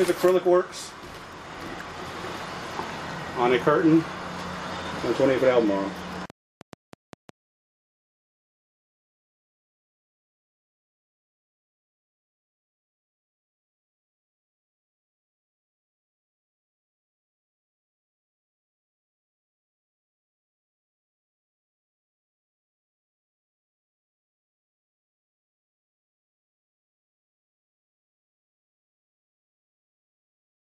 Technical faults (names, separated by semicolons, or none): train of clicks